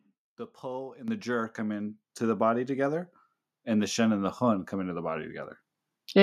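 Call software judged the microphone too quiet and stepped up its input volume twice. At 1.08 s, between "the pull" and "the jerk come", the level jumps about 9 dB. At 2.10 s, before "the body together and", it jumps about 5 dB more, lifting speech and background together.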